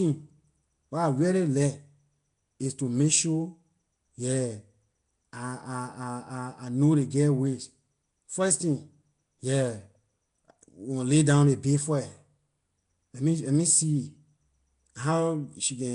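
Speech with Nellymoser compression running through the whole clip: a rough, hissy halo and a smeared, underwater quality, with nothing above 10.7 kHz, which likely points to Flash's Nellymoser Asao codec at around 44 kbps. A spectrogram would show blocky noise-filled patches and a hard ceiling.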